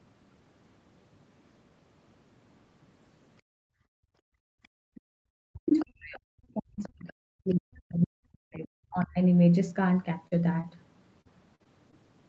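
From 3.42 to 4.95 s the room background is gated by the echo canceller. While the far end's audio was playing out of the loudspeaker, the canceller pulled the microphone down hard, by about 39 dB at its deepest, so the ambient bed sinks to near silence for roughly a second and a half before springing back. Unlike double-talk suppression, this affects the background noise rather than the talker's voice, and the room tone returns when the canceller lets go.

Faint scraps of the other side's voice leak through at 4.63, 4.95, 5.68, 6.83 and 7.5 s, each well under a fifth of a second long. These are likely residual loudspeaker echo that the canceller failed to remove. Most sit very low, around 30 to 40 dB under the talker, but the one at 5.68 s is stronger, about 20 dB down.

From 5.27 to 8.66 s, and again from 8.89 to 9.19 s, the talker's voice is pushed down in pieces, by about 40 dB at worst in the first stretch and about 35 dB in the second. 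This is speech suppressed in double talk, likely because both sides were talking at once and the canceller attenuated everything it could not separate from the echo. Here the talker's voice itself ducks and breaks up, which distinguishes it from the background gating earlier.

Two brief short concealed packet losses follow. About 40 ms is missing at 10.27 to 10.33 s and about 20 ms at 10.61 to 10.65 s. The receiver patched each hole by extending the preceding sound and then crossfading back into the real audio, which leaves a small smear or wobble. Each is an isolated glitch, which sets it apart from what comes next.

From 11.21 to 11.94 s, repeated packet loss produces a robotic sound. Four holes arrive in close succession, totalling about 120 ms, with the longest about 44 ms, so roughly 15 percent of the stretch is synthetic fill. The patches follow one another too quickly for the audio to recover in between, giving a choppy texture rather than a single blip. 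Across the clip, the top end stops near 8 kHz, consistent with a wideband Opus call path.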